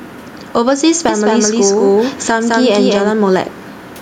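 Gain pumping runs through the whole recording, most likely from input gain set far too high with a fast limiter clamping down on every loud syllable. The level swings by around 10 dB, and the faint room noise sits about 45 dB below the speech.

From 1.09 s to 3.11 s there is a doubled audio track, likely a second capture path running late. A full-band copy at about the same level trails roughly a fifth of a second behind, dry and without decay, and it starts and stops abruptly.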